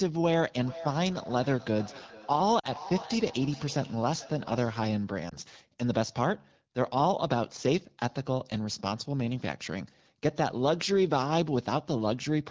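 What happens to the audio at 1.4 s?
At 1.4 s the speech is inside a feedback echo between two devices, lasting from 0.6 to 5.14 s. A nearby device replays the call into a microphone, so each syllable returns thinner and ringing roughly every 0.4 s, peaking about 14 dB down. A spectrogram shows evenly spaced, fainter copies.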